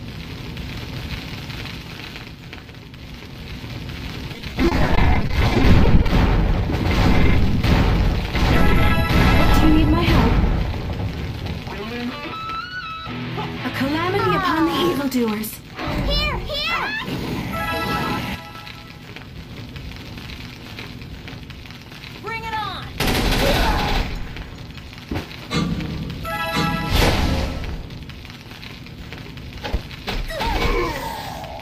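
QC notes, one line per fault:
4.33–6.08 s, repeated packet loss (robotic sound): frequent short dropouts, the longest about 30 ms, each patched by repeating the preceding sound, so the stretch turns choppy. The spectrogram shows repeated, smeared slices with vertical seams. The waveform shows small copied or flattened segments.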